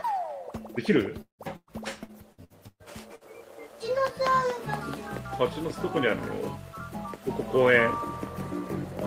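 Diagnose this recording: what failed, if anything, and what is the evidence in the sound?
Choppy sound from 1.21 to 3.24 s: repeated network packet loss, seven gaps up to 172 ms, each patched by stretching the preceding sound.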